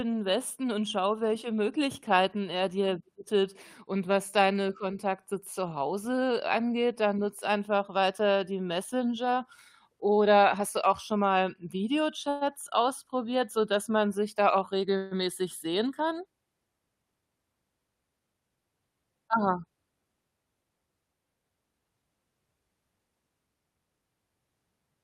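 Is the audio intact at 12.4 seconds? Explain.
No. A call audio freeze runs from 12.30 to 12.43 s, likely from delayed packets draining the jitter buffer. The last sound is stretched into a fading buzz or hiss, seen as smeared, flat spectrogram bands. Nothing is lost, and playback resumes about 116 ms late.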